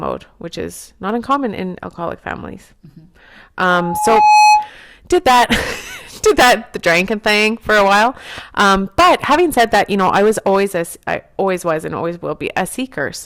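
Hard clipping runs through the whole speech clip. The signal was driven about 9 dB past what a stage could pass, so around one sample in twenty has its peak sliced flat. Those flat tops add high harmonics, giving a fuzzy crackle on louder syllables. Unlike the gentler rounding of soft saturation, the distortion appears abruptly on peaks and adds brittle upper content, while quieter passages stay clean.

At 1.09 s, between "which is" and "uncommon in alcoholic families", an overlap between stream segments removes about 6 ms. Two segment time stamps overlapped, and the player trimmed sound that was never actually doubled, so the waveform jumps forward. A dropout would leave a gap or a stretch of silence. Here nothing is inserted. The audio simply skips ahead by a sliver.

From 3.69 to 4.70 s, just before "did that", a loudspeaker feedback squeal appears. A microphone picked up the loudspeaker it was feeding, and at 846 Hz the loop gain went above one, so that tone fed on itself. 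It rises over roughly 0.7 s until it sits around 5 dB above the speech. A steady interfering whistle would hold a constant level. This one swells from nothing, and that growth marks it as feedback.

A second overlap between stream segments occurs at 7.08 s, between "did that the" and "thing for a while", this time about 9 ms. It comes about 6 s after the first, which points to segments roughly 6 s long, with each boundary clipping a little audio as the next one starts.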